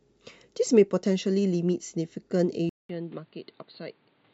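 Input switched to a poorer device at 2.69 s: after a gap of about 200 ms, the speech returns through a much narrower channel, with nothing above 4.6 kHz, so it sounds dull and boxy for the rest of the clip. The level drops by around 10 dB, and a faint new background noise sits well beneath the speech. The likely cause is the recording changing mid-stream to a different microphone or a headset's call profile.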